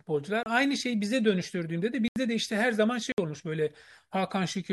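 A speech recording is broken by three blocks of digital silence. At each one the sound drops straight to silence and comes back with no fade. The first runs from 0.43 to 0.46 s, about 30 ms. The second, from 2.08 to 2.16 s, lasts 80 ms. The third, from 3.12 to 3.18 s, lasts 60 ms. Both are heard as short holes. They point to an output buffer that was not filled in time.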